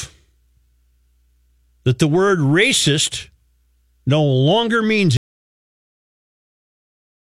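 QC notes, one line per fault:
5.17 s to the end: audio dropout to silence. Right after "no longer means" the speech cuts out mid-flow and it's silent from there on, with no room tone at all, so the input most likely dropped while the recorder kept writing silence.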